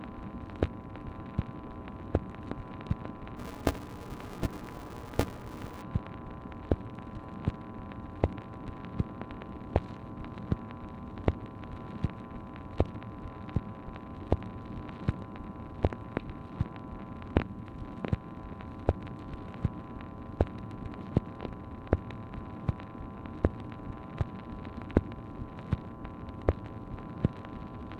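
Buffer tearing from 3.37 to 5.82 s: writer and reader cross mid-period, splicing in audio about 15 ms stale, giving a 188 Hz rattle that fits a 256-sample buffer.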